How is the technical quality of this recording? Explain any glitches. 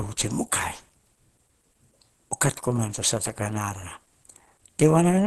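The recording has plainly audible codec damage across all of its roughly 5 seconds. The speech sounds muffled, hoarse and grainy, and nothing is present above 12.2 kHz. This is likely Opus compression at a low rate, around 16 kbps, which points to the encoder's hybrid mode. That mode codes the lower band with its speech model and fills the upper band sparsely, keeping band energy but losing fine detail. The voice becomes rough, with the top end cut off.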